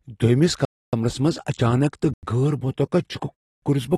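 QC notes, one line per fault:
Throughout: AAC compression. The top end stops dead at 12.4 kHz, and the speech comes across dull and smeared, with a warbly, fizzy edge on sibilants. That's most likely AAC-LC at a low bitrate, something in the region of 36 kbps.
0.65–0.93 s, 2.14–2.23 s, 3.34–3.62 s: block of digital silence. The audio drops hard to silence with no fade. The first and last holes run about 279 ms, the middle one about 93 ms (fits a 4096-sample buffer), just before "غٲر مُتوقع".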